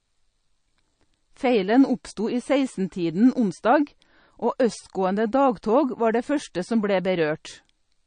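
MP3 compression damage runs through the whole of this speech recording, from start to finish, and is plainly audible. Nothing is present above 9.4 kHz, where the encoder has cut the treble off flat. Below that, the sound takes on a watery, swirling quality as weak frequency lines drop in and out from frame to frame, and consonant attacks smear. The heavy trimming likely comes from a low MP3 bitrate, around 34 kbps.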